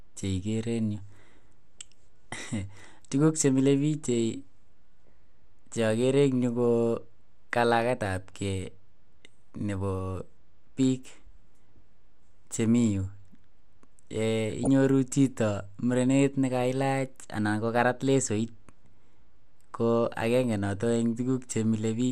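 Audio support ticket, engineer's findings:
MP2 compression, whole clip. Speech dull and band-limited. Highs drop in and out. Gurgling, granular edge. Damage plainly audible. Likely cause: MPEG Layer II encode at low rate, sound consistent with about 80 kbps. Mechanism: too few bits across the 32 sub-bands. Upper bands switched off frame by frame. Remaining bands coarsely quantised. Result is flicker plus grain. Typical of a starved broadcast chain.

DAB burbling, 14.5 to 14.67 s. Short burst of burbling over the speech, about 0.17 s long. Span fits roughly a dozen corrupted audio frames. Probable component: DAB receiver on a weak signal. Mechanism: residual bit errors slip past error correction into the MP2 stream. Error rate sounds low, a small fraction of a percent. Corrupted samples put noise blips into single sub-bands; corrupted scale factors jolt sub-bands in level.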